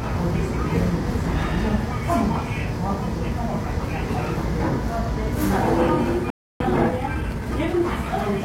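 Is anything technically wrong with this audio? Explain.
Yes. At 6.30 s a playback stall cuts the sound to silence for about 300 ms, until 6.60 s, likely because the player ran short of data.

From 6.60 to 7.80 s, time-compressed catch-up plays the audio about 1.25 times faster to clear the backlog. Small pieces are cut out and cross-faded, so the sound is hurried while its pitch stays unchanged.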